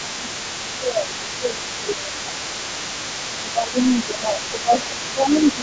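From the very start to the end, the other side's voice is leaking through. A second voice runs under the talker, roughly 15 dB quieter and faint. The likely cause is an echo canceller leaving loudspeaker playback in the microphone signal.

Speech is suppressed in double talk at 0 to 0.28 s, 0.72 to 2.88 s, 3.42 to 4.74 s, and 5.04 s to the end. The talker's voice dips by around 10 dB in each stretch. It sounds pulled back. The canceller likely confused both voices and turned everything down.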